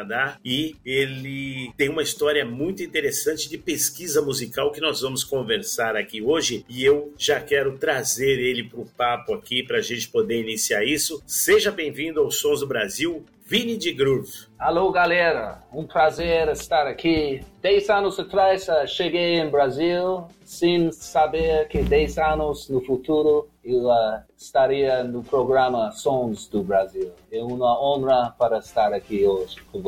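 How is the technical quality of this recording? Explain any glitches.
The recording is marred by a constant buzz that runs through the whole clip.

Throughout, a filter restarted on every block forgets its state and starts each block from silence, leaving a small transient at every boundary. These transients repeat at 345 Hz, which fits a 128-sample block, and form a buzz that rises and falls with the sound's level. Mains hum, by contrast, stays steady whatever the signal does.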